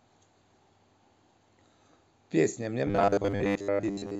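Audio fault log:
2.87 to 4.19 s: robotic sound from repeated short buffers. The speech becomes a stiff metallic buzz near 100 Hz, likely from a 10 ms chunk looping over most of that stretch.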